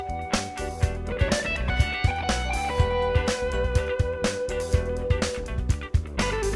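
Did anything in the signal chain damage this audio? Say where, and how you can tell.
No, no signal-chain damage heard.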